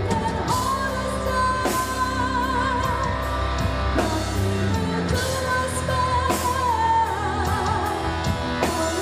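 Nothing technical goes wrong anywhere along the way here, so there's nothing to flag.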